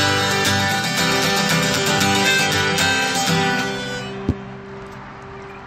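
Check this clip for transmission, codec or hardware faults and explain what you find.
The signal holds together without any audible defect introduced by the recording chain or the path the audio travelled.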